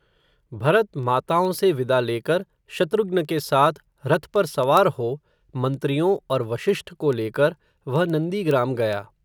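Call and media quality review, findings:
Word clock ticks: sharp clicks of uneven strength at a steady rate of about one every 0.15 s, running 0.20–9.21 s through the speech. Probable component: digital input receiving S/PDIF, AES or ADAT on its own unlocked clock. Mechanism: the two clocks drift by something on the order of 150 ppm. At each slip a single sample is dropped or repeated, and the neighbouring samples are misread.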